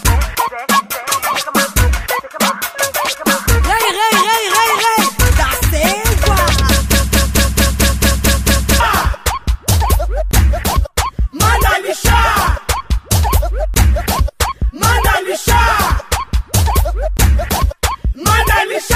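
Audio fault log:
6.92–8.80 s, broken-record loop: A fragment of about 223 ms repeats exactly, back to back, eight times, so the sound locks into a stuttering cycle for nearly two seconds before normal playback resumes. The identical repeats point to a stall in which the player, encoder or stream likely kept resending the last fragment it held instead of new material. Whatever should have played in that span is missing.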